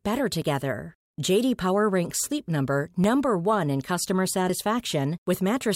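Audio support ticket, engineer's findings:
Small forward skip in the speech at 0.42 s, another at 3.04 s; roughly 10 ms of audio missing each time, no gap of silence. Likely a dropped buffer (overrun): capture side not draining samples before hardware overwrote them, so both sides of the lost block are joined directly. Waveform shows an abrupt discontinuity at each splice point. Spectrogram shows a thin full-band vertical line at each.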